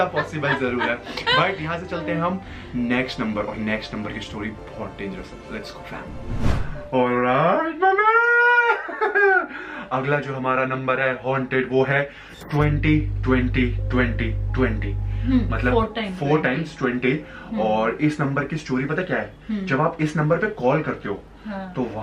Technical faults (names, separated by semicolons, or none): mains hum